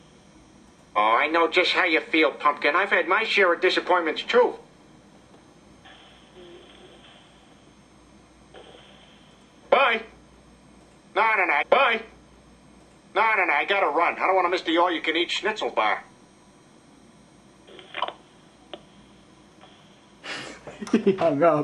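At 11.61 s the audio jumps back with a small blip and replays about 2.0 s of what came just before, through to 13.61 s. This is a stream segment repeated: the player fetched or queued the same segment twice, stretching the programme by that amount.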